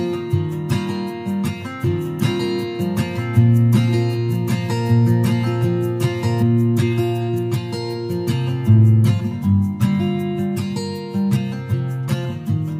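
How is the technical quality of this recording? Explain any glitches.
The recording has one clear fault: a doubled audio track from 1.84 to 6.42 s. A second, full-band copy of the sound runs about a second and a half behind the original and about 5 dB quieter. It is likely a slower capture path or an edit holding two copies out of step. It sounds like a dry, decay-free echo that starts and stops abruptly. A spectrogram shows the same patterns repeated, shifted right and slightly fainter.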